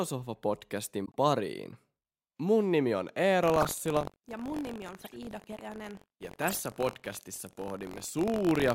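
Corrupt frame muted, 1.05 to 1.15 s: damaged compressed frames were rejected by the decoder and replaced with silence. The speech drops out abruptly for about 100 ms, a hole spanning several frame lengths, and then resumes with the timing intact.

Buffer tearing, from 3.41 s, just after "nimi on", to the end: the writing program and the hardware reading the ring buffer have drifted, so their positions cross in every period. A small slice of each buffer holds audio from roughly 70 ms earlier, with hard joins on both sides. This gives a rough buzz at 46.9 Hz, which fits a 1024-sample buffer, and it is heard only while there is signal.

Corrupt frame decoded, at 3.61 to 3.67 s, 4.99 to 5.16 s and 6.48 to 6.58 s: flipped bits in these frames were decoded anyway, so misread gains and codes put energy at the wrong frequencies. Each one sounds like a brief chirp or noisy burst lasting a frame or several. 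The first is loudest, peaking at about −10 dBFS. The third peaks at about −20 dBFS and the second is faint at about −35 dBFS.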